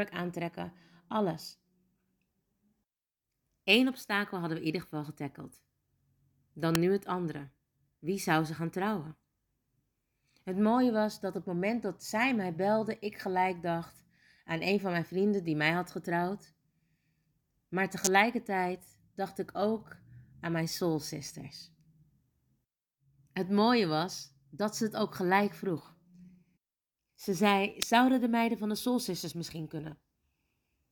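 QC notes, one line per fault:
6.75 s, 18.05–18.07 s, 27.82 s, electrical switching spike: sharp, loud snaps cut across the speech, peaking around -5 dBFS. These are likely arcs from a nearby switch, motor or static discharge picked up by the audio line.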